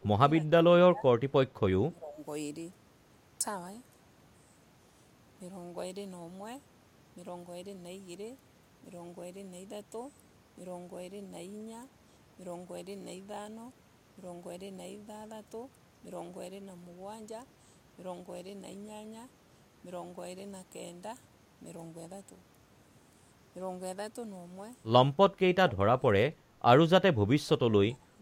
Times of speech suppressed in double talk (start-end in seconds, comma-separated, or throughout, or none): 0.00-1.07, 1.90-2.23, 25.30-26.62, 27.04-28.21